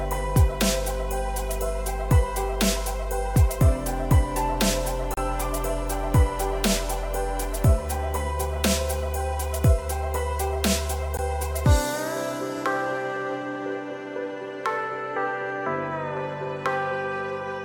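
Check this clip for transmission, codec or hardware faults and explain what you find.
There are two brief dropouts, each a gap at a join of encoded pieces. The first runs from 5.14 to 5.17 s, about 33 ms; the second, about 16 ms, falls at 11.17 s, six seconds later. Separately encoded segments were joined without trimming the encoder's start delay and last-frame padding, so the continuous sound stops abruptly and resumes where it left off. A waveform shows a flat break; a spectrogram shows a thin vertical blank band with slightly smeared edges.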